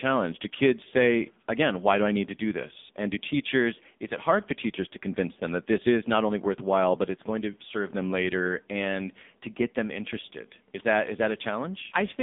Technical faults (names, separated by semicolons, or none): AMR narrowband mobile codec